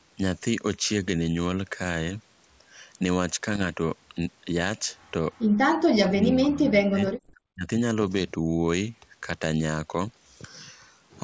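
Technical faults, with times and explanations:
3.54–3.64 s, 7.07–7.34 s, 10.07–10.26 s: bit errors on an ADPCM link. Flipped bits throw off the decoder's step size and predictor, producing pops and rough bursts with brief level jumps.
5.93–7.70 s: speech suppressed in double talk. The speech dips by up to about 40 dB and drops out in pieces over roughly 1.5 s, likely from an echo canceller turning down both sides while they overlapped.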